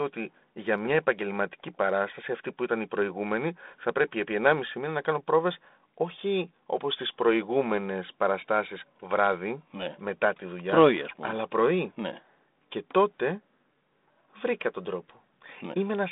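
Speech over a telephone-band line, no technical faults present.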